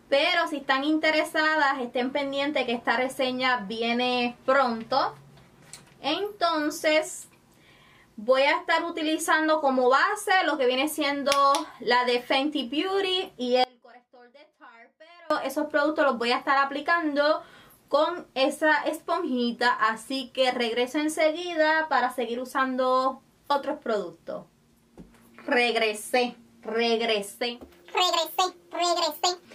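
At 13.64 s the sound abruptly drops to a faint residue, roughly 30 dB below normal, for about 1.67 s until 15.30 s. This audio dropout was likely caused by a brief break in the signal feed while the path after it stayed live.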